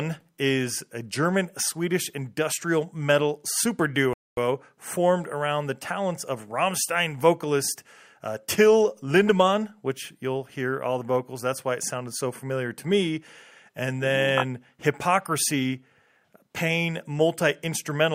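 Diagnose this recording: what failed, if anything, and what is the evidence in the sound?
Rebuffering stall: playback ran dry after "industrial metal super", leaving flat waveform gap and blank spectrogram band from 4.13 to 4.37 s, then resumed intact.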